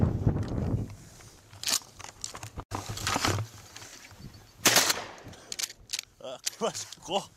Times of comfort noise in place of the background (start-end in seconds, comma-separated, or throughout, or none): none